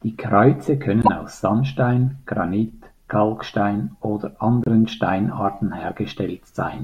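At 1.02 to 1.09 s and again at 4.64 to 4.68 s, damaged data in a compressed stream makes the decoder misread corrupted frames and lose sync, giving a brief chirp or squawk.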